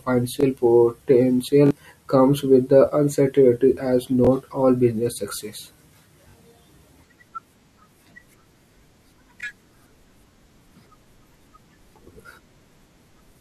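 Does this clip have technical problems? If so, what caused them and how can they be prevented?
Yes. Audio arrived late, so the device repeated its last buffer of about 21 ms (fitting a 1024-sample buffer), causing brief stuttering buzzes at 0.41–0.43, 1.66–1.71 (before "comes with the uncertainty"), 4.25–4.27, 6.29–6.34, 9.41–9.43 and 12.22–12.25 s. Larger buffers or steadier scheduling would prevent these repeated buffers.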